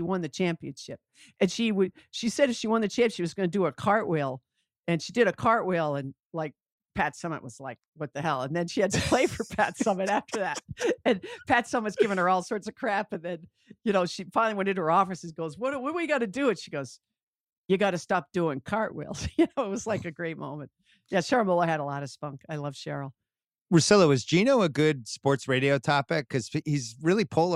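No technical faults can be heard anywhere in this speech.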